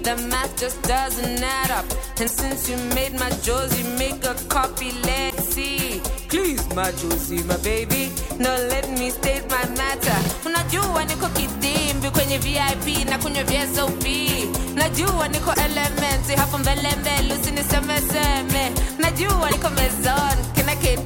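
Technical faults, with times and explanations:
2.26–2.32 s, 5.29–5.34 s, 15.53–15.59 s, 19.50–19.55 s: broken MP3 bit reservoir. Each spot is a brief glitch where the sound skips forward and comes out as a short chirp, burst of noise or hole, roughly two frames of about 26.1 ms each. Likely dropped MP3 frames, leaving the next ones to decode borrowed bits from the wrong data.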